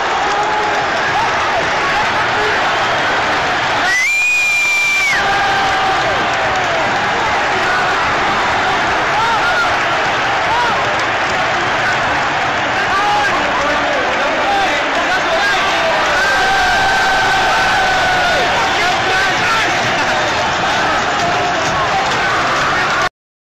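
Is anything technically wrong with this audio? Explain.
Yes, there's a brief patch of DAB burbling from 4.89 to 5.14 s. A trickle of bit errors, about 0.07 percent, got past error correction into the MP2 data, so short blips of noise appear in single sub-bands, giving a burbling over the sound.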